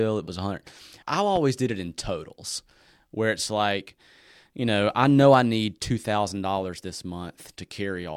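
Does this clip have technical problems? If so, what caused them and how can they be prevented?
Yes. A loud pop occurs from 1.36 to 1.39 s, just before "did it in totals". Its cause is likely a sudden voltage step, such as a plug being seated, a switch being thrown, a static discharge or a driver glitch, that entered the signal path. The following circuitry shaped that step into a single brief pulse, heard as a sharp pop peaking a few decibels above the speech, which continues underneath it. To prevent this, mute or power down the chain before connecting or switching anything and keep cables and interfaces grounded.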